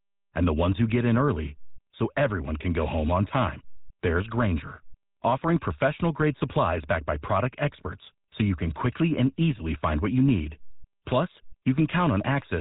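From start to finish the speech has a buzzy, gravelly roughness and nothing above 4 kHz. This is GSM full-rate codec damage. The speech is rebuilt from a vocal-tract model driven by sparse, regularly spaced pulses, which fits the 13 kbps full-rate codec.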